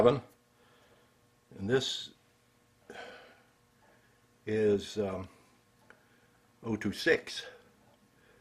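Nothing stood out on listening to this audio.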